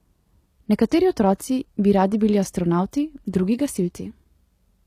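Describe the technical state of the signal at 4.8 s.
At 4.8 s the speech carries HE-AAC compression that is present throughout the clip, and the sound points to a low rate around 24 kbps. The treble is likely rebuilt by spectral band replication, so s sounds turn gritty and lispy. A spectrogram shows copied-looking upper bands.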